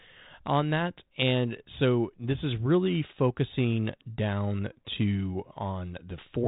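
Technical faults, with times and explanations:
No technical faults are present in this speech clip. It passes through a G.726 ADPCM path, with nothing above 3.8 kHz and a light coding grain that fits a 32 kbit/s link.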